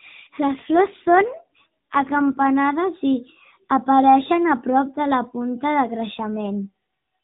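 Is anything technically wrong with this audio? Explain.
Yes. From 0.48 to 2.50 s, and again from 6.18 to 6.70 s just after "de la punta de", the speech turns rougher, buzzier and more synthetic, with no gap and the narrowband limit unchanged. This is an AMR rate drop. The mobile codec falls from a mode that fits 12.2 kbps to one that fits about 5.9 kbps, so fewer pulses model each frame until the rate recovers.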